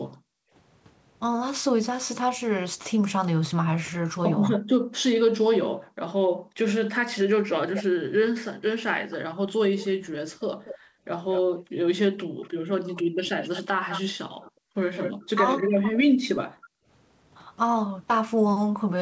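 From 0.16 to 0.53 s the room background is gated by the echo canceller: while the far end plays out, the canceller clamps the microphone path, and the ambience falls away by about 40 dB for roughly 0.4 s before snapping back.

At 4.55 to 4.59 s a brief repeat of the speech appears 283 ms late and about 10 dB down, most likely an echo leak where the loudspeaker signal slipped past the canceller. Background gating follows at 4.59 to 7.4 s, dropping the ambience by about 40 dB over roughly two seconds in total.

From 7.75 to 16.69 s the delayed copy returns, trailing the speech by 234 ms at around 10 dB below it. Gating recurs between 10.78 and 16.87 s, with dips of about 40 dB adding up to roughly a second. Within that span, from 12.35 to 16.13 s, the talker's own speech is likely suppressed in double talk: when both ends are active, the canceller attenuates the near voice as well, pulling it down by around 30 dB in pieces totalling about a second. 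Throughout, the G.722 call path limits the audio to nothing above 8 kHz.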